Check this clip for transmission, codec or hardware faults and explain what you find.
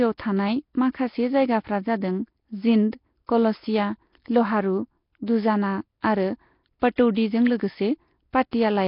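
One fault runs through the whole clip: heavy Nellymoser compression. The speech sounds rough and smeared, with a hissy, underwater halo. Nothing survives above 5.3 kHz. The likely cause is the Nellymoser Asao codec at a low bitrate, near 22 kbps. Starved bands get no bits and are refilled with noise.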